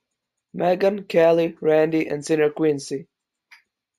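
From the first moment to the end, this speech carries imaging from linear upsampling. It sounds like it was brought up from a 16 kHz rate to 44.1 kHz by joining samples with straight lines, which filters poorly. The top of the original band comes out dulled, and a faint mirrored copy of it sits between 8 kHz and 16 kHz, roughly 35 dB below the signal, giving sibilants a thin metallic shimmer.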